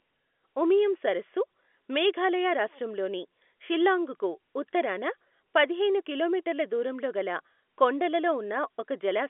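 No technical faults can be heard in this speech recording. It arrives through G.711 telephone coding, so the sound is held to the line band of about 250 Hz to 3.5 kHz, with nothing above 3.7 kHz.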